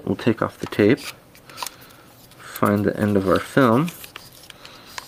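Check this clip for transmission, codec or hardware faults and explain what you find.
I find no faults in this clip.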